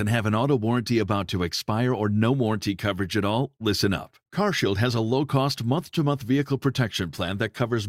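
No technical faults can be heard anywhere in this speech recording. Nothing in the sound points to a problem at any stage of its capture or delivery.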